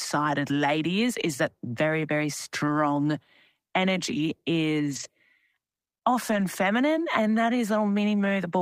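A speech clip with four spots where a lost packet was rebuilt from error correction. The first runs from 0.99 to 1.01 s, just before "is that very very", and the second is at 2.67 s, right after "is that very very". Each lasts 20 ms, which fits a single lost packet. Longer patches follow at 4.91 to 5.05 s and 6.27 to 6.41 s, each about 80 ms, which points to four separate lost packets. There is no gap because the decoder played the low-bitrate copies carried in the following packets. Those stretches sound rougher and grainier. On a waveform the envelope stays continuous with no dropout, while a spectrogram shows short smeared, noisier bands where the harmonic detail coarsens.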